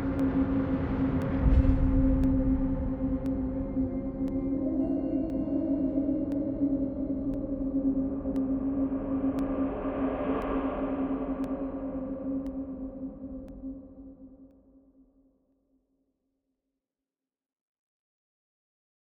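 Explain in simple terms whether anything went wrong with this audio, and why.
Something did go wrong: periodic USB or driver dropouts. From 0.19 s to 18.60 s, every 1.024 s, about a millisecond of sound gets swapped for silence, around twenty times. A background task stalling the driver causes it, and you hear it as steady little ticks.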